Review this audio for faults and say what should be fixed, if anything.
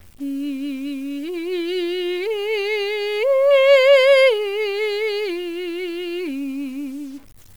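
Low bit depth without dither runs through the whole music clip. Quiet passages turn gritty, and the grain rises and falls with the signal, sitting roughly 35 dB below it. The sound points to 8-bit truncation, likely from a bare word-length reduction. To prevent it, keep a higher bit depth or apply dither before reducing word length.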